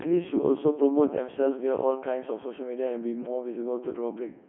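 Throughout, the speech sounds robotic and buzzy, squeezed into roughly 250 Hz to 3.4 kHz: Codec 2 vocoder resynthesis, which fits its 3.2 kbit/s mode.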